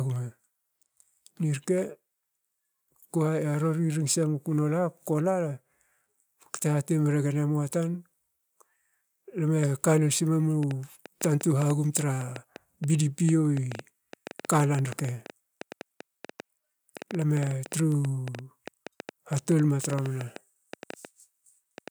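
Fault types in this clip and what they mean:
Train of clicks: likely interference or a faulty connection injecting pulses, giving 6.85 irregular clicks per second over the speech from 10.63 s to 21.89 s.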